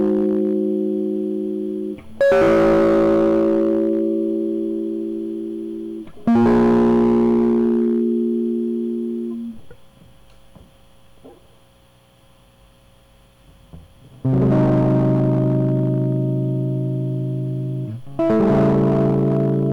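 Hard clipping comes and goes through this music: lightly from 0 to 0.65 s, about 3 dB over, then heavily at 2.21–4.06 s and 6.28–8.15 s (about 12 dB), 14.26–16.22 s (about 9 dB) and 18.19 s to the end (about 10 dB). Peaks get sliced flat, so the first stretch just crackles while the later ones turn every loud hit into harsh fuzz.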